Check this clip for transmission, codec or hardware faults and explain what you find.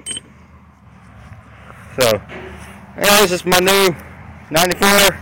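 Integer overflow occurs at 2.01 to 2.11 s, 3.04 to 3.87 s and 4.57 to 5.08 s. Peaks driven about 2 dB, then about 4 dB, past the integer limit wrap to the opposite sign instead of being held, producing violent cracks far harsher than clipping.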